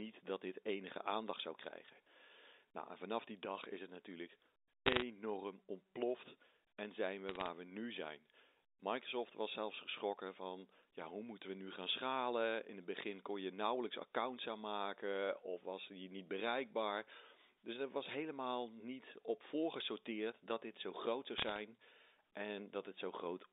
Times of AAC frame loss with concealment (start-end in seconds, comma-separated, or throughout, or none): none